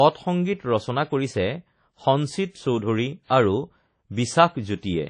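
WMA compression runs through the whole recording. The speech carries a ringing, washy texture and a hiss that swells and fades with the voice's level, and nothing is present above 10 kHz. This is likely the work of a transform codec at a low rate, consistent with an early WMA encoder at around 32 kbps. Its quantisation noise smears across tens of milliseconds, and weak spectral detail is discarded entirely, leaving the damage plainly audible.

Pre-echo occurs from 3.27 to 3.30 s, where a short hiss arrives about 27 ms ahead of a sharp onset, which then sounds softened and smeared. The attack fell late in a transform block, so noise scaled for the loud portion was distributed across the whole block, including the quiet stretch before the attack.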